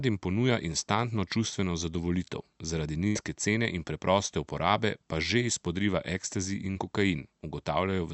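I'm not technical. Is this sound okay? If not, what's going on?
No. At about 3.07 to 3.18 s the speech briefly turns into a held, fading sound, then jumps ahead. This is a burst of packet loss: roughly 80 ms of the call was lost or arrived too late, so the receiver stretched the last sound to cover the gap.

At about 6.71 to 6.78 s there is a quick smear or wobble. This is a short concealed packet loss: around 40 ms went missing, and the receiver patched the hole by continuing the previous sound before blending back in.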